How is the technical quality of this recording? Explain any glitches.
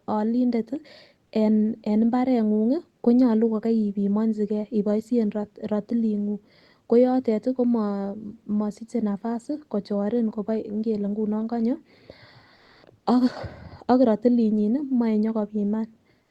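One glitch is audible, in a speech recording carried over a call link whose Opus coding limits the top end to about 12 kHz.

Comfort noise in place of the background, 12.55 to 12.83 s: the sender likely stopped transmitting during a speech pause, and the receiver filled those 280 ms with synthetic noise. The real background, about 39 dB below the loud parts, becomes a flat, featureless hiss, shifting level by about 3 dB.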